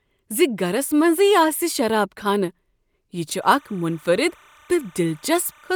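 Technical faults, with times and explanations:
3.42–5.75 s, timecode bleed: linear timecode at 29.97 frames per second leaks in roughly 30 dB down, adding a chirping warble that flips between tones near 1 and 2 kHz.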